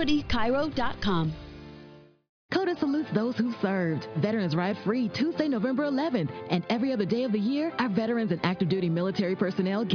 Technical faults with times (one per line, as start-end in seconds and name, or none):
none